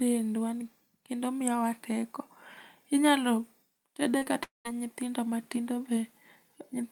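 At 4.17 s and again at 4.23 s there's short concealed packet loss: about 40 ms, then 20 ms, of speech got papered over by the decoder, so you hear a quick smeared wobble. Then from 4.43 to 4.67 s the speech drops into a fading buzz and near-silence before "nyithindo matindo" resumes, likely a long network dropout with that stretch lost.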